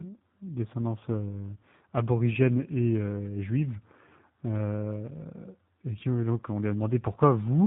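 Tandem speech coding runs through the whole clip: the speech was decoded and re-encoded across two speech codecs in a row, the last fitting a low-rate coder like G.729A, each working on the previous one's damage. It sounds rough, muffled and warbly, with nothing above 3.8 kHz.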